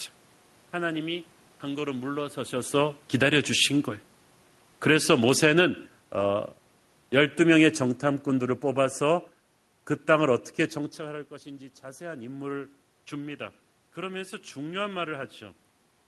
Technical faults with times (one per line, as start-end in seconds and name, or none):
2.73-10.46 automatic gain falling